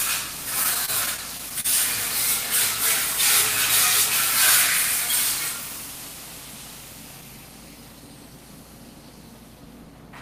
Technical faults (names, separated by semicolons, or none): repeated stalls (stutter)